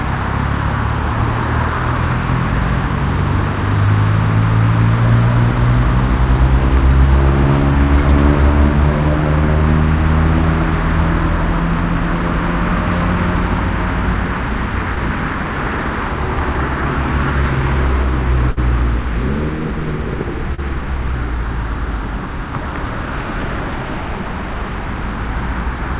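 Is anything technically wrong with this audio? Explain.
Yes. The audio has two short concealed packet losses and one burst of packet loss. The band stops at 4 kHz, which fits a narrowband call codec such as G.711 mu-law at 64 kbps.

The short concealed packet losses fall at 14.95 to 14.99 s and at 20.55 to 20.60 s. Each time, about 20 ms of audio never arrived in time. The receiver covered the hole by extending the last sound, 15 ms the first time and 32 ms the second, then blended back into the real signal. Each one is heard as a brief smear or wobble.

The burst of packet loss runs from 18.51 to 18.59 s. Here about 60 ms went missing in one stretch. The receiver filled 60 ms by continuing the preceding sound and fading it as the gap went on. A tonal sound turns into a held buzz, and a noisy one turns into a fading hiss. The audio then picks up further along, and the 60 ms in between is simply gone.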